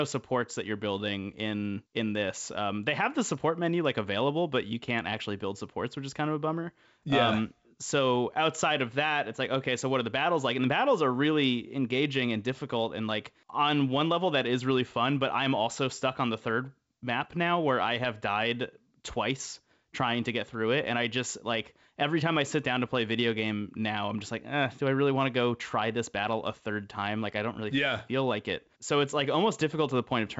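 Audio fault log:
Nothing stood out on listening to this speech, which carries the expected G.722 wideband telephone band with nothing above about 7.7 kHz.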